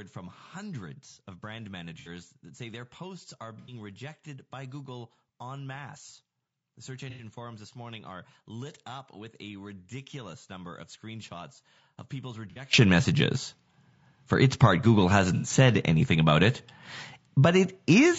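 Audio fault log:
throughout: low-delay AAC compression. A likely AAC-ELD encoder, with its short frames starved of bits, leaves the speech rough and grainy, with noise between harmonics. The damage fits roughly 32 kbps.
0.0 to 12.73 s: one channel inverted. With one stereo channel's polarity likely reversed, the shared centre cancels when summed, dropping the level by about 21 dB to a faint residue until 12.73 s.
2.00, 3.59, 7.10, 12.50 and 15.35 s: AAC frame loss with concealment. Lost frames are patched from the previous spectrum, giving smeared, noisy gaps of about 60 or 90 ms. The last falls just before "said anything about it".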